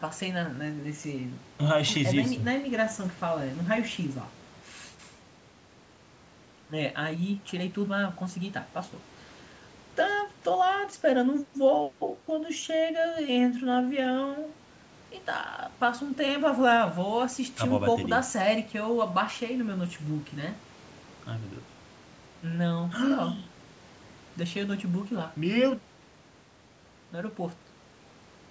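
The speech shows no technical faults; it has passed through a call's microphone processing, whose high-pass filter trims the lowest bass and whose band stops at about 8 kHz, both normal for that path.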